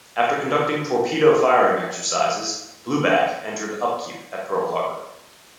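A speech recording with no technical faults to report.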